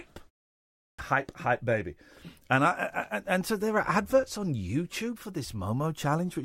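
A speech clip with a clipped start after a pause. Following a silent gap of about 0.52 s, the output device appears to have dropped into a low-power state and needed time to wake and relock. Roughly 0.24 s of sound, from 0.74 s to 0.99 s, never reaches the output, so "hype hype baby" bursts in abruptly without its opening. On a waveform the envelope jumps from flat silence straight to speech level with no onset, and a spectrogram shows a hard vertical edge instead of a gradual attack.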